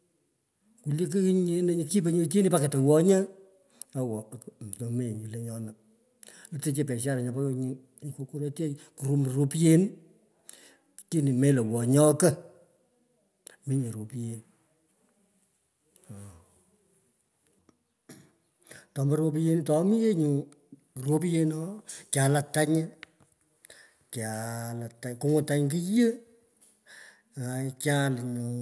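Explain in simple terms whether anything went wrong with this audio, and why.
Nothing went wrong with this audio, so there is no fault or cause to explain.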